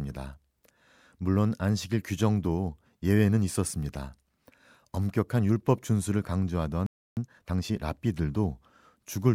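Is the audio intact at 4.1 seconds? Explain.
Yes, at 4.1 seconds the speech plays through intact, with no dropout, glitch or other fault at that moment.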